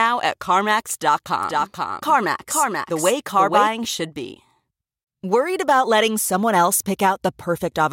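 A doubled audio track runs from 1.43 to 3.67 s. The speech repeats about half a second later, about 5 dB quieter, likely from a second capture path or an out-of-step edit. On the waveform and spectrogram it shows as a shifted full-band copy that starts and stops abruptly.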